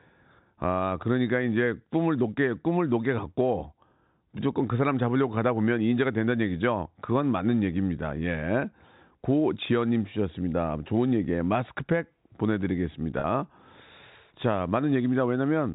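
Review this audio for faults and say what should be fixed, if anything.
At 13.20 to 13.24 s the speech briefly holds on a slightly buzzy, sustained tone. That is packet loss with pitch repetition on the G.711 telephone link: about 40 ms went missing, which fits two 20 ms packets, and the receiver bridged it by repeating the last pitch period. Reducing loss on the network path, or adding forward error correction, would prevent it.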